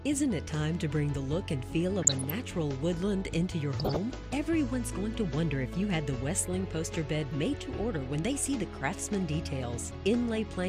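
Two short bursts of DAB burbling, at 2.02 to 2.30 s and 3.80 to 3.97 s, put short noise blips into the audio as residual bit errors corrupt MP2 sub-band data. On a spectrogram, isolated frequency bands flash brighter or drop out in frame-sized blocks.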